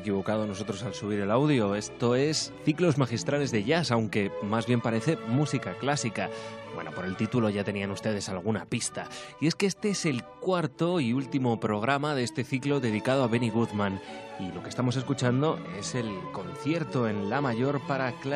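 No audible fault turns up anywhere in the audio.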